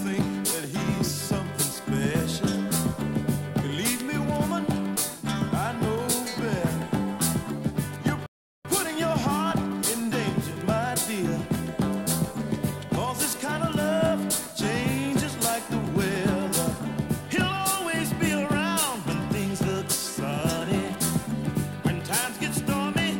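At 8.26 s the sound halts mid-flow and stays silent for about 0.38 s, until 8.65 s. This playback stall was likely caused by the player running dry of data or being blocked. The gap is much longer than a clicky millisecond dropout.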